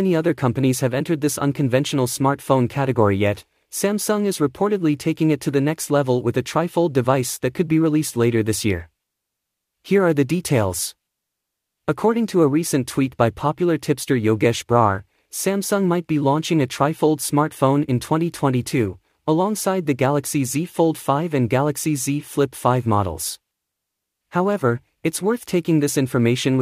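Loose connector crackle appears from 3.35 to 3.43 s, a short irregular burst of scratchy crackle lasting about 80 ms. It comes from a worn or dirty contact somewhere in the signal path that briefly loses and regains its connection as it shifts, chopping the audio into fragments many times within that instant. Each make and break leaves a jagged edge in the sound, and any DC sitting on the line turns those edges into pops.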